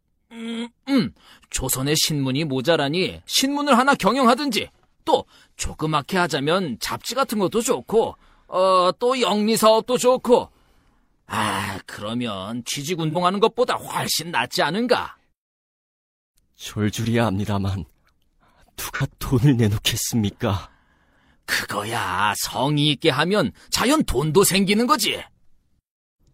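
At 13.11 to 13.17 s and again at 18.95 to 19.01 s, there is AAC frame loss with concealment. About 43 ms of audio goes missing each time, which points to a single lost frame. The decoder patches the gap from the last good spectrum. Each spot sounds briefly smeared and phasey.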